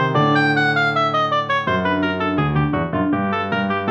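No technical faults can be heard anywhere in the audio, and the signal stays steady and intact for its whole duration.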